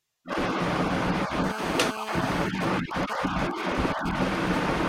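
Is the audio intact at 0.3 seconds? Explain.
Yes, at 0.3 seconds the speech plays through cleanly, with no dropout, click, distortion or other fault to be heard at that moment.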